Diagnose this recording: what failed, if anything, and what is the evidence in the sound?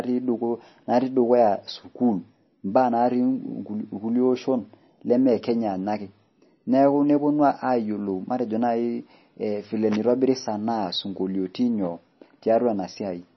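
The codec stage failed, with MP3 compression as the likely cause, audible for the whole recording. Nothing in the speech reaches above 5.9 kHz, a hard treble ceiling of the kind an encoder imposes when starved of bits. The damage is heavy: weak spectral components drop in and out from frame to frame, giving a watery, swirly texture, with s sounds turning metallic and onsets smeared. That degree of loss points to a very low bitrate, around 26 kbps.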